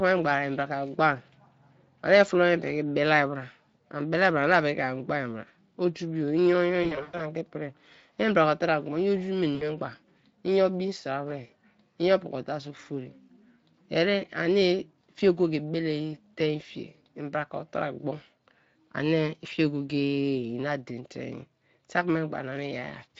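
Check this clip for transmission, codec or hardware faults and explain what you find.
The speech has two stretches of VoIP packet loss concealed by the speech codec. The Speex coding itself is heard only as a light roughness.

From 6.83 to 7.22 s, and again from 9.55 to 9.67 s, packets went missing. The decoder filled the gaps by extending its last pitch and filter shape at falling gain. The first stretch scatters about 200 ms of loss over 360 ms, with a longest run of 100 ms. The second is a 60 ms hole, which fits three 20 ms frames. Each gap sounds like a smeared, buzzy tone or coloured noise fading out, not a clean silence or click. The speech stays thin briefly after packets resume, which sets it apart from a simple dropout.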